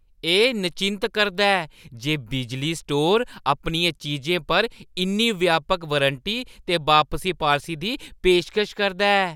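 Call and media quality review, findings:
No faults found in this speech recording. Nothing in the audio needs action.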